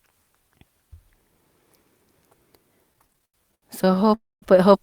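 From 2.93 s to 4.14 s the speech goes into repeated stalls, a stutter. The packets were arriving late or slower than playback, so the jitter buffer kept running dry. There are 22 little gaps in that stretch, the longest about 87 ms, and each one is patched by stretching out the last bit of sound. That's 368 ms of filler, roughly a third of the span. Nothing actually drops out, but the speech drags and hiccups along.

Right after, at 4.14 s, the audio stops moving for about 278 ms, until 4.44 s. It starts with a short smeared continuation of the last sound that fades away, then about 210 ms of silence, and then the speech picks up exactly where it left off. That's a call audio freeze. The likely cause is that packets got held up in transit long enough to empty the buffer completely. Nothing is lost, but the playback now runs about 278 ms later than before.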